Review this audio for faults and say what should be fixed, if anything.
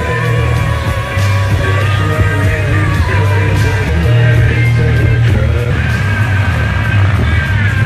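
Compressed frames are skipped at 2.72 s and at 3.88 to 3.90 s. The sound jumps ahead by roughly 100 ms and 150 ms, multiples of the 23.2 ms frame. Verify file integrity after encoding and transfer.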